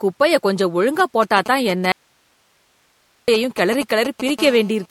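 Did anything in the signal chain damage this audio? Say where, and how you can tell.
Yes. Codec stage: the speech sounds swirly and hollow throughout, with nothing above 16.6 kHz, likely generation loss from about four MP3 encodes at 64 kbit/s.

Analogue wiring: GSM signalling bursts from 0.99 to 4.30 s, after "குப்பைய கொஞ்சம்", sound like galloping groups of 217 Hz ticks at about −10 dB. A nearby phone is signalling, and the grouping sets this apart from steady buzz.

Network or buffer: an audio dropout to a faint residue from 1.92 to 3.28 s leaves only hiss for 1.36 s, at about −45 dB. The cut is abrupt, unlike a pause. A likely cause is the wanted signal being lost while the path stayed live.

Analogue wiring: GSM phone buzz from 4.39 to 4.86 s is a continuous, raspy 217 Hz tone at about −18 dB. This is a phone in a call, and it is steady rather than clustered.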